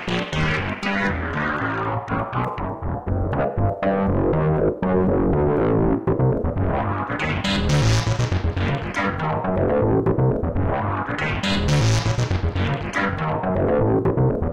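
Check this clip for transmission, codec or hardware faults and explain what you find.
Nothing stood out on listening to this recording of sounds.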